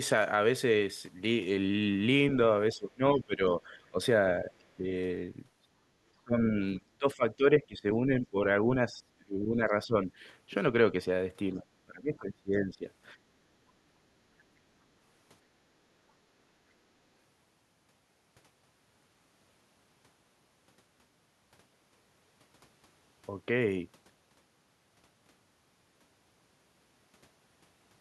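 From 2.72 to 3.99 s the speech sinks by up to about 20 dB. At 4.41 to 4.87 s there is only a slight dip of about 5 dB. From 6.16 to 10.11 s it falls by around 25 dB, with roughly three seconds chopped or thinned, and again from 11.54 to 12.86 s by about 25 dB. This is speech suppressed in double talk, likely from an echo canceller that couldn't separate the local talker from loudspeaker echo and attenuated both.

The room tone then drops out briefly, by about 12 dB from 13.15 to 13.3 s and by about 14 dB from 15.91 to 16.44 s, and recovers each time. This is background gated by the echo canceller. While the far end played through the loudspeaker, the canceller clamped the microphone down hard, and the room sound returned once it released.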